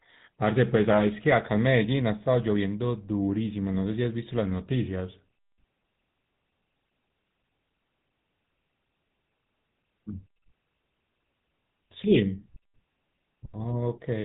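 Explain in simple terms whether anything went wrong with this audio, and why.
The voice has been squeezed through the GSM full-rate codec, the coding used on early digital mobile phones, and the damage is plainly audible from start to finish. Nothing above 3.8 kHz survives, so the speech sounds narrow and phone-like, and there is a buzzy, gravelly roughness riding on it. A plain phone-line filter would only muffle the sound. Here the codec rebuilds the voice from a coarse pulse pattern, and that adds the rasp.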